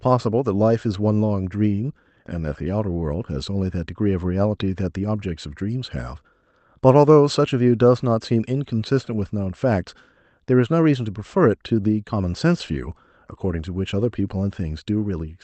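No technical faults can be heard in this speech recording, and the call-path coding behaves as expected, with its ordinary coding noise and its upper limit at about 8 kHz, which fits an Opus stream running at a moderate bitrate.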